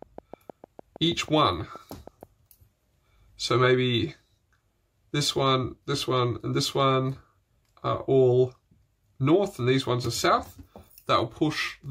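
From 0.02 to 2.24 s a train of clicks ticks over the audio: about fifteen near-identical pulses at a steady 6.35 per second, roughly as loud as the sound itself. Unlike random crackle, the even spacing and matching shape point to a likely source in nearby interference or a faulty connection or power supply.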